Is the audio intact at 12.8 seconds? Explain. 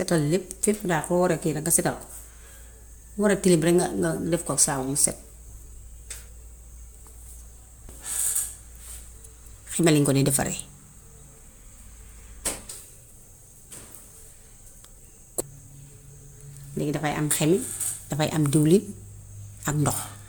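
No. Generation loss runs through the whole clip, so 12.8 s sounds swirly and hollow with smeared attacks, likely from MP3 at about 130 kbit/s encoded around four times. A spectrogram shows accumulating noise below a 20.1 kHz ceiling.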